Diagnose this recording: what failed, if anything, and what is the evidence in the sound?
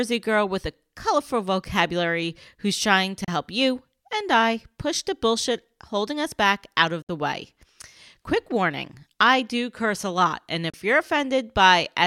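Digital broadcast dropout at 3.24–3.28 s, after "vocabulary who's trying to", then at 7.02–7.09 s and 10.70–10.74 s. When frames failed at reception, the receiver muted with a 3 ms fade. The 32 and 64 ms holes fit one or two lost frames, and that speech is gone.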